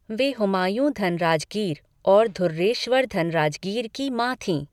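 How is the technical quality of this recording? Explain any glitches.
No glitches can be heard.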